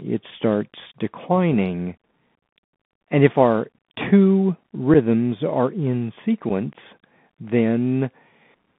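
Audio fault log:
Throughout: Bluetooth CVSD headset codec. The speech sits in a narrow phone band, about 150 Hz to 3.5 kHz, with gritty hiss underneath and scratchy s sounds. A one-bit delta coder that fits a 64 kbps CVSD link can't track fast, loud highs.
4.94 s and 6.49 s: unconcealed Bluetooth headset packet loss. About 7.5 ms of speech, roughly a single packet, drops out abruptly each time, giving a brief hole. The first falls between "if our two" and "are in", the second just after "are in". Nothing fills the gaps.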